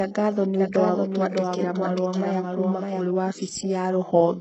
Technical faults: HE-AAC compression; doubled audio track

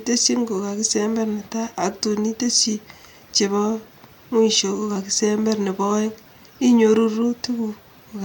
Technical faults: none

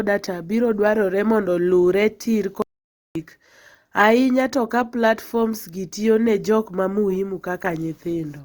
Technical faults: audio dropout to silence

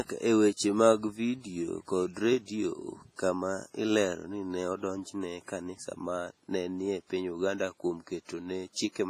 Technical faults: WMA compression

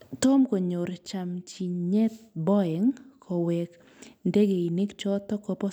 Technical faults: none

